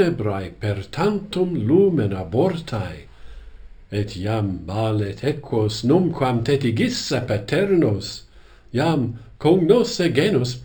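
Throughout, imaging from linear upsampling: a 12 kHz signal was interpolated to 44.1 kHz, leaving a dulled top and faint mirrored copies around 6 to 12 kHz, a metallic shimmer that plain low-passing wouldn't add.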